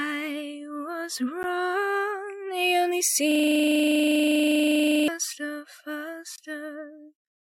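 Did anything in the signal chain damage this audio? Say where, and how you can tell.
Yes. Block of digital silence at 1.43 s (10 ms) and 6.36 to 6.38 s (20 ms): this happened at the driver or buffer stage. The audio drops straight to silence and returns with no fade. That points to an output buffer left unfilled in time.

System hang loop from 3.31 s to 5.08 s: also at the driver or buffer stage. A 40 ms piece of audio repeats exactly for about 1.8 s, recurring at 25 Hz. The system froze while the hardware kept cycling through its ring buffer.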